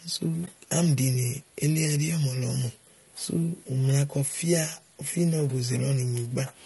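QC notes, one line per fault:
throughout: low-delay AAC compression. The speech sounds rough and grainy across the whole clip, with a noisy haze filling the gaps between the voice's harmonics and a thin, somewhat artificial top end. This is plainly audible and most likely comes from a low-delay codec such as AAC-ELD running at a modest rate, which fits about 32 kbps. At this rate the available bits run out, so the fine harmonic structure smears into noise.
0.45 to 0.48 s: AAC frame loss with muting. The sound briefly dips and then returns, rather than cutting off abruptly. The decoder lost a block of audio, which fits a single missing frame of about 20 ms, and replaced its spectrum with silence. Because neighbouring frames overlap, the sound fades down into the dip and back up out of it instead of stopping dead.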